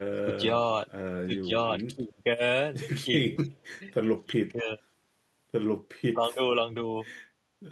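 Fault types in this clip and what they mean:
Speech suppressed in double talk: the voice keeps ducking in short patches, at 0.16, 1.22, 1.89, 3.04, 4.2 and 6.13 s, sometimes for a fifth of a second, the longest for about half a second around 4.2 to 4.7 s, where it sinks by about 25 dB. This is likely an echo canceller hearing both ends at once, mistaking the near talker for loudspeaker echo, and pulling everything down.
Echo leak: from 3.36 to 3.64 s a faint copy of the voice trails the original by roughly a quarter of a second, about 20 dB below it. It's most likely the far end's loudspeaker sound reaching its microphone and slipping past that end's echo canceller, so a scrap of what was said comes straight back down the line.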